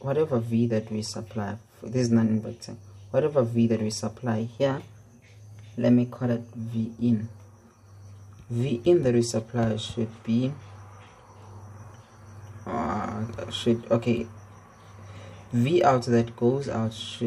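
From 4.40 s to 6.58 s the sound runs about 5.3% fast and sits roughly 90 cents sharp, close to a semitone, then snaps back to normal pitch and speed. This is likely a drift correction step, where clock-matching software briefly sped up playback to rebalance its buffer. On a spectrogram every harmonic line steps up together for that span and drops back at the end, while the waveform looks slightly compressed in time.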